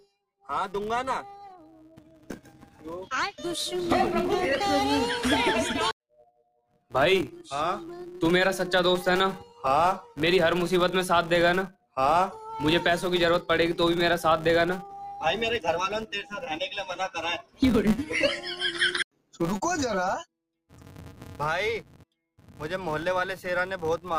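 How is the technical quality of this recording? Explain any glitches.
The technical quality is compromised by two faults: a constant buzz and four brief dropouts in level.

Throughout, a steady buzz at 188 Hz rides on the sound, rising and falling with its level. This is a filter restarted on every block: each block of what fits 256 samples begins from silence, leaving a small transient tick that repeats at the block rate.

At 6.14 to 6.91 s, 11.72 to 11.97 s, 17.42 to 17.62 s and 19.12 to 19.40 s, the sound suddenly sinks by about 17 to 19 dB. This is sound cut by the noise suppressor, which mistook those passages for noise and pulled them down too hard.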